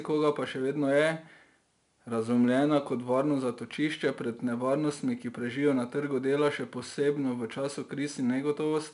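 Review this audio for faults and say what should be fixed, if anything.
A gritty hiss rides on every loud syllable and roughens the consonant attacks throughout, with nothing above 10.6 kHz. This is 4-bit ADPCM compression, consistent with about 88 kbps. Keep the speech as PCM or use a modern perceptual codec.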